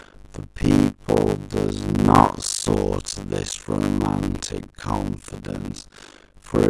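From start to end, the speech carries a steady buzz at 50 Hz. It comes from a block size mismatch (padded). One stage hands over shorter blocks than the next stage takes in. The missing part of each block is filled with silence, which fits blocks of about 256 samples being written. So a short gap lands in every block, and those gaps form the buzz. The speech also runs slow, at 0.533 times normal speed, yet keeps its usual timbre.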